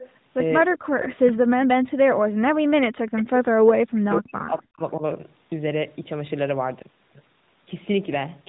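Speech, heard through a narrowband mobile path with nothing above 3.8 kHz. Echo leak at 0.00–0.09, 1.00–1.32 and 3.16–3.23 s: a faint copy trailing by 249 ms, about 15–20 dB down, likely far-end loudspeaker sound the echo canceller missed. Speech suppressed in double talk at 0.64–0.81, 1.20–3.43 and 3.74–5.03 s: the voice drops by up to about 40 dB in pieces while the other side talks, likely the canceller muting both.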